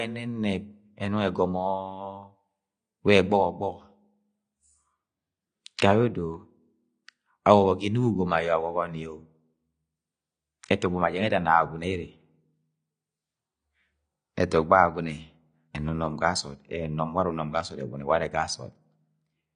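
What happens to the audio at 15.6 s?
At 15.6 s, as everywhere in the clip, the speech carries audible AAC compression damage: nothing survives above about 9.8 kHz, leaving it dull, with a smeared, warbling fizz on sibilants. This is likely AAC-LC coding at a low bitrate, around 32 kbps, where coarse quantisation empties upper bands.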